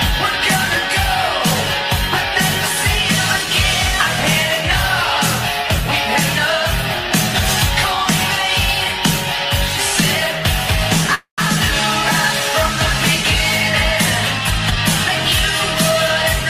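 At 11.15 s the sound stalls in a call audio freeze lasting until 11.40 s. The last moment is stretched into a fading buzz that decays to near silence for about 120 ms. This likely happened because packets stalled in transit and the jitter buffer emptied. Unlike a dropout, nothing is lost. The sound resumes exactly where it stopped, and about 232 ms of delay is added to everything after it.

From 14.39 to 15.09 s a jitter buffer speed-up drains a backlog. The receiver repeatedly trims pitch-period-sized slices, removing about a tenth of a second in total, so the audio plays at 113 % speed. It sounds hurried and compressed, yet the pitch stays where it was. That sets it apart from a simple playback-rate change, which would raise the pitch along with the tempo.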